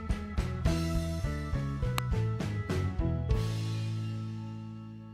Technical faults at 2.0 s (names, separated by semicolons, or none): electrical switching spike